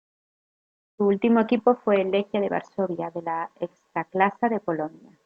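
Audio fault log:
Nothing faulty can be heard in this speech recording.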